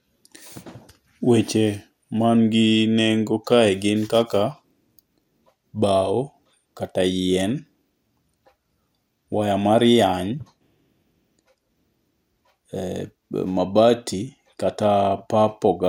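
Nothing stood out as a technical problem anywhere in the recording when listening to it.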